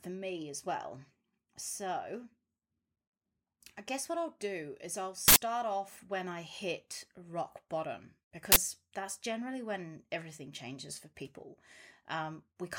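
Uninitialised buffers were played before any audio was written to them, so leftover memory came out as loud bursts of digital noise at 5.28–5.36 s and 8.52–8.56 s in the speech.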